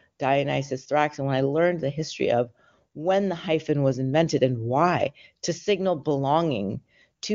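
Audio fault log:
No faults heard anywhere in this speech.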